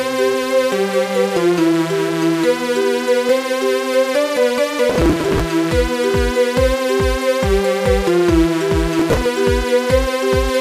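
At 4.90 s a burst of processor overload crackle begins and runs to 5.40 s. The processor could not finish each short buffer in time, and dozens of deadlines slipped in a row. Each missed buffer was skipped outright, leaving a hard-edged gap. The result is gritty tearing over the sound, with a grain that fits buffers of about 5 ms. A shorter burst follows from 8.99 s to 9.26 s, with fewer skips, then stops.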